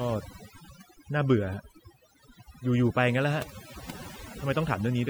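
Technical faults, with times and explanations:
Throughout: overdone noise removal. The noise reduction on this speech is set far too hard. Every frequency band that falls near the tool's picture of the background noise is pulled right down or shut off, so the gaps between phrases sink to near silence dotted with twinkling, chirpy specks. Quieter parts of the voice sit close to that noise estimate and get cut along with it.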